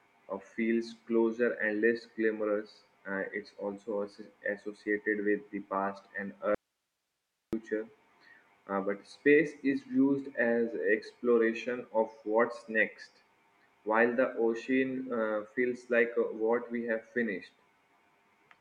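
A speech clip with an audio dropout to a faint residue from 6.55 to 7.53 s. The signal vanishes abruptly for about 0.98 s, leaving only hiss far below the speech level. This is likely a momentary break in the signal path while the downstream chain stayed live.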